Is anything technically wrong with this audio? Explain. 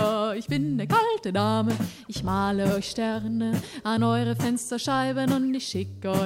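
No, no technical faults detected.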